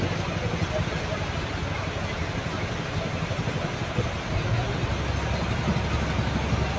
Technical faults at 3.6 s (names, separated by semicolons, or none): none